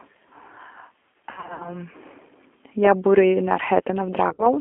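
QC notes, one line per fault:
Throughout: G.729 codec. The speech has passed through an 8 kbit/s G.729-family coder that rebuilds each 10 ms frame from a vocal tract filter, a pitch predictor and a handful of pulses, on a line band of roughly 250 Hz to 3.4 kHz. The codec damage is plainly audible: nothing above 3.4 kHz survives, the low end is thin, and the voice has the slightly rough, synthetic grain of a speech model.
1.32 to 1.76 s: VoIP packet loss concealed by the speech codec. About 200 ms of audio went missing, scattered over roughly 280 ms, with the longest gap 60 ms. Each time, the decoder carried on from its last pitch and filter settings at falling gain, so the speech smears into a buzzy tone or coloured noise that fades. Because every frame builds on the one before, the voice stays weak or distorted for a while after packets return.
4.29 to 4.52 s: VoIP packet loss concealed by the speech codec. 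A shorter burst, with about 80 ms lost over roughly 120 ms, again with a longest gap of 60 ms. The decoder filled the holes by extrapolating the last frame, producing the same stretched buzz or coloured noise that fades in level, and the recovery lag leaves the voice weak for a while after packets return.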